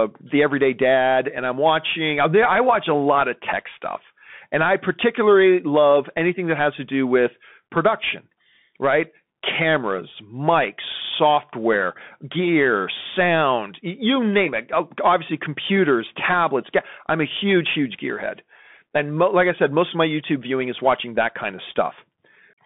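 From start to finish the speech carries the sound of a Bluetooth CVSD headset codec, which fits 64 kbps. The band is squeezed to roughly 200 Hz to 3.5 kHz, and the one-bit up-down coding with its adapting step leaves a granular hiss beneath the speech, roughens s sounds, and smears loud, fast transients. A plain narrowband phone line would sound clean within its band. This grainy, slope-limited texture marks CVSD.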